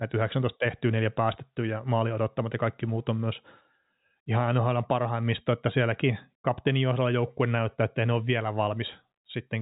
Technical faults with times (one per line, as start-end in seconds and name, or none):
none